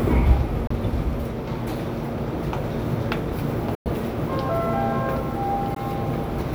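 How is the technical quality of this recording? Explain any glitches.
The recording has three short silent gaps. At 0.67 to 0.71 s, 3.75 to 3.87 s and 5.75 to 5.81 s, the sound drops out, then resumes further along. This is likely a Bluetooth dropout, where late packets never reached the headphones.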